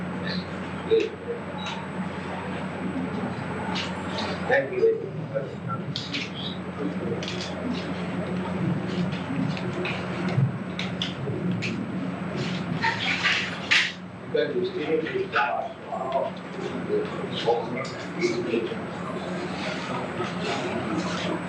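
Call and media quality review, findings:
Nothing to flag here: listened through the whole clip and heard no audible faults, so no ticket needed.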